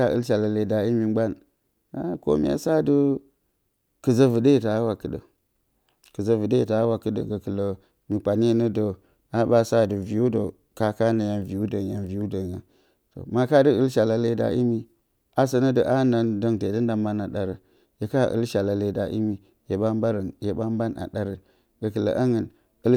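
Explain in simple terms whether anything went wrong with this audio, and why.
Nothing in the recording stood out as a problem on listening, so there is no fault to point to.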